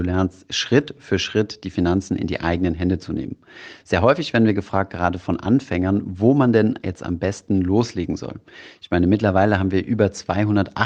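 No technical faults can be heard in this speech clip at any point in time.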